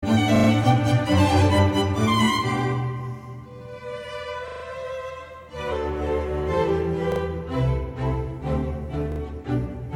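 Music with a repeated buffer fault, heard as short stutters at 0.36, 4.48, 7.12 and 9.12 s. Each time, one tiny slice replays two to four extra times with hard joins. The slice length fits a 40 ms buffer. Little or no audio seems lost.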